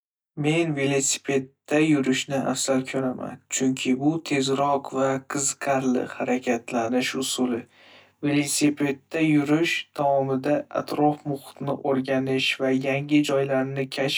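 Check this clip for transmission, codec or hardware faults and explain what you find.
One fault runs through the whole speech clip. Channel delay (comb filtering) is present from start to finish: one channel arrives roughly 20 ms late, and summing to mono cancels shared content at evenly spaced frequencies, starting around 30 Hz. The speech sounds rough and slightly doubled.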